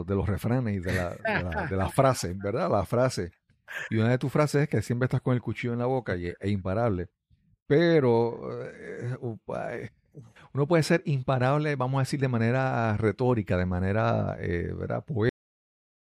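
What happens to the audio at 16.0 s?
At 16.0 s the clip is in digital silence from a cut-off end. The final stretch of audio was never written out or played back, so the stream ends abruptly at 15.29 s and stays dead through to 16.07 s. The speech is severed mid-sound rather than finishing: there is no decay or fade, just an instant drop from active signal to silence, and 16.0 s falls inside that empty tail.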